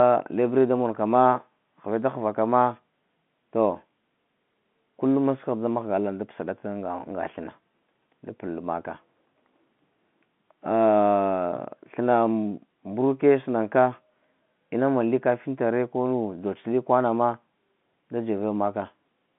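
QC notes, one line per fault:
The speech sits on an ordinary telephone line, with the band running from about 150 Hz to 3.5 kHz, nothing above 3.8 kHz, and at most a faint level-following hiss beneath it, which fits G.711 mu-law telephone coding at 64 kbps working as intended.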